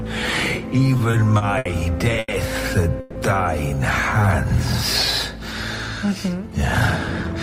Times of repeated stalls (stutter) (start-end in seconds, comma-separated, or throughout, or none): 0.97-1.68